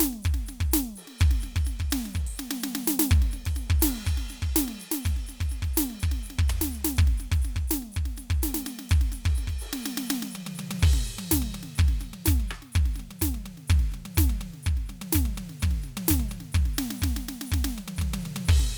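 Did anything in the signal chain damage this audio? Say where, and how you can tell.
No, nothing in this music stood out on listening as damage from any stage of the signal chain.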